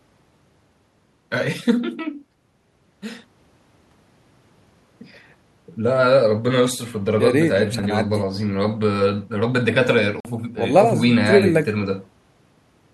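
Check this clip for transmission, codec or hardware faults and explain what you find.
One fault: a Bluetooth dropout from 10.20 to 10.25 s. The wireless link most likely failed to deliver audio packets to the headphones in time, and with nothing to play the output fell silent for about 46 ms, a gap that fits a couple of lost packets. The speech cuts out and resumes further along, as though it had kept running through the hole, so a short slice of the speech is simply missing.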